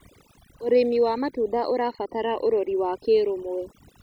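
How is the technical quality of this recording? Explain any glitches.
Technical quality is compromised by overdone noise removal across the whole speech clip. Aggressive noise reduction switched bands off near its noise estimate, leaving twinkling specks and holes in the spectrogram.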